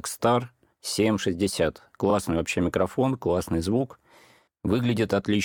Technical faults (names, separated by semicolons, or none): repeated frames